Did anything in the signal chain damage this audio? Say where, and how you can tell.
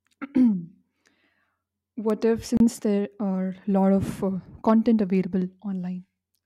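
Yes. The converter stage has word clock ticks. Sharp ticks recur about every 1.5 s from 0.59 s to 5.15 s, about four in all. The receiving device runs on its own clock, around 15 ppm off. Each slip drops or repeats one sample.

Playback on the wireless link has a gap. The sound cuts to 30 ms of silence at 2.57 s, ending at 2.60 s, then resumes. This is likely a Bluetooth stall. Delayed packets emptied the headphones' buffer until resent data arrived.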